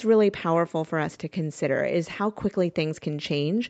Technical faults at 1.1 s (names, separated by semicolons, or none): echo leak